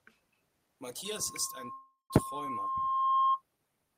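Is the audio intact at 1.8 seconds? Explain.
No. A call audio freeze runs from 1.72 to 2.11 s: packets were likely held up in transit, so the jitter buffer ran empty. The last sound is stretched into a fading buzz, then about 170 ms of silence. The speech resumes where it stopped with nothing lost, only about 0.38 s later.

A loudspeaker feedback squeal also covers 1.8 s, running from 1.05 to 3.42 s. The microphone picks up its own loudspeaker, and the loop gain tops one at 1.1 kHz. That tone swells over roughly two seconds into a squeal about 5 dB above the speech.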